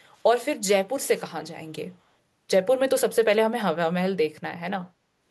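A speech clip with an echo leak near the start: one end's echo canceller likely failed to remove everything its microphone caught from the loudspeaker, so a very faint copy of the speech, delayed by 254 ms, slips back briefly from 0.18 to 0.22 s.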